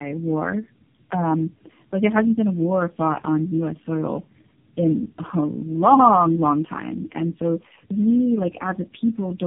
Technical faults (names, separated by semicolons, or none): tandem speech coding